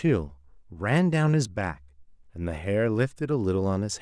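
No technical faults can be heard in this speech recording. Nothing in the audio calls for a timed description.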